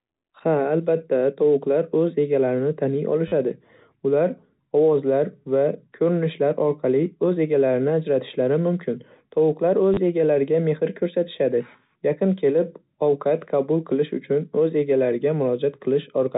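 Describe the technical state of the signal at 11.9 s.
At 11.9 s the speech is intact, carried through the narrowband G.711 telephone coding with nothing above 4 kHz and only the faint level-following quantisation hiss that format leaves.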